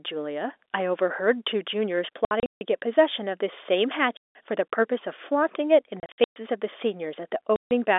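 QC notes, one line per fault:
2.25–2.61 s, 4.17–4.35 s, 6.0–6.36 s, 7.56–7.71 s, packet loss filled with silence: the telephone-band speech drops into dead holes with hard edges, 240, 180, 240 and 150 ms lost. The first and third are scattered gaps, longest 150 and 120 ms. Every hole is a multiple of 30 ms, which fits 30 ms packets lost in transit and replaced by silence.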